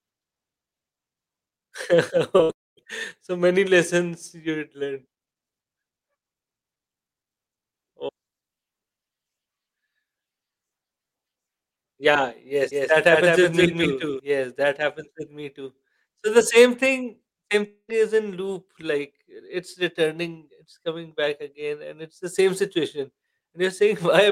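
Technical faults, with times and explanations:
2.37 to 2.41 s, short concealed packet loss: about 20 ms of the speech failed to arrive in time, and the receiver bridged 16 ms of it by extending the preceding sound before blending back, leaving a brief smear just ahead of the longer break.
2.43 to 2.51 s, burst of packet loss: roughly 60 ms went missing in a row, and the decoder filled all of it by continuing the last sound while turning it down, so a short held, fading tail replaces the lost stretch.
2.51 to 2.79 s and 17.67 to 17.90 s, long network dropout: these gaps sound like a likely interruption of arriving audio. About 260 ms is lost at the first and 220 ms at the second. The concealment fades to silence for about 230 ms and 70 ms respectively, and speech resumes further on with that material gone.
12.72 to 14.20 s, doubled audio track: a second full-band copy of the speech runs about 200 ms behind the original at roughly equal level, with no reverberant decay. 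It switches on and off abruptly, most likely from a slower capture path or an edit holding two misaligned copies.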